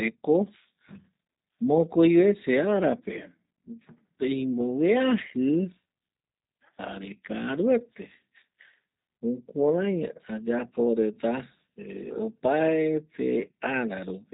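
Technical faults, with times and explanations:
Throughout: G.729 codec. The speech is rebuilt rather than carried, so it comes through clear but slightly rough and synthetic, with plainly audible damage. Each short frame is reduced to a vocal tract filter, a pitch predictor and a handful of pulses, which explains the buzzy, thinned texture. Nothing is heard above about 3.8 kHz, leaving the sound narrowband and dull, and this fits a low-rate 8 kbit/s telephony coder.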